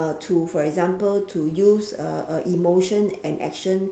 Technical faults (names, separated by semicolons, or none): none